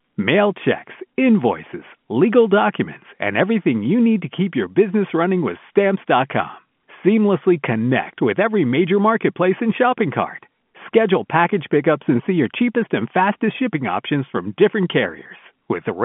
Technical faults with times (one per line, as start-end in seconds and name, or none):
none